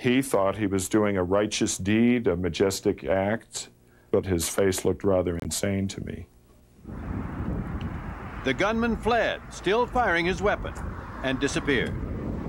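At 0.56 s a brief blip, then at 5.40 to 5.51 s a louder burst, peaking near -20 dBFS against about -30 dBFS earlier: each is a corrupt frame decoded, flipped bits misplacing energy. Spectrograms show blocky, frame-length smears at wrong frequencies.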